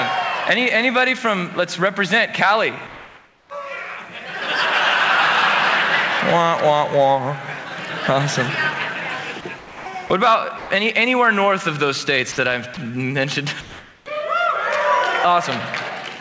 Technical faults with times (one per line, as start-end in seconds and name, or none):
0.00-16.20 gain pumping
2.87-3.50 comfort noise in place of the background
9.59-9.86 sound dropped by the voice detector
10.58-10.70 sound dropped by the voice detector
12.32-12.38 sound dropped by the voice detector
12.74-12.77 sound dropped by the voice detector
13.61-14.06 comfort noise in place of the background